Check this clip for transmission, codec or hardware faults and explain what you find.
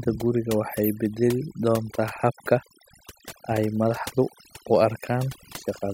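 Overdone noise removal runs throughout the speech. A noise reducer set too strong pulls individual frequency bands down or out whenever they sit near its noise estimate, taking quieter voice detail too. The background drops and breaks up into twinkling specks.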